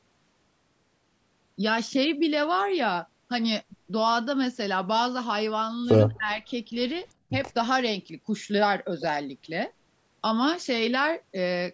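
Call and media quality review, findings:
Echo leak: faint, brief delayed copy of the far-end speech at 6.15 to 6.19 s, roughly 35 dB under the talker, lagging 246 ms. Likely the loudspeaker-side echo canceller letting residual acoustic pickup through and returning it.

Speech suppressed in double talk: near-end speech dips as much as about 15 dB between 6.18 and 6.44 s, with about a fifth of a second affected in patches. Likely the echo canceller mistaking overlapping talk for echo and attenuating both.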